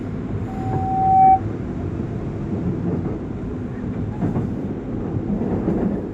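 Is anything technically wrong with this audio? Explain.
Yes. From 0.47 to 1.41 s, loudspeaker feedback squeal: a 765 Hz tone swells over most of a second to roughly 15 dB above the sound, as the microphone-loudspeaker loop gain exceeds unity.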